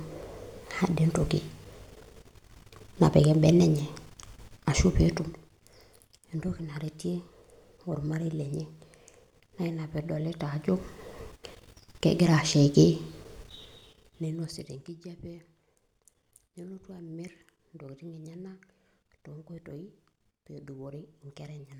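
At 13.41 s, zipper noise begins as the speech is turned down. It lasts until 14.96 s. The level drops by roughly 25 dB, but not smoothly. It falls in 2 dB jumps, about ten each second. Each jump lands abruptly on the waveform and leaves a small click. Together the clicks form a fast ticking that rides on the fading speech.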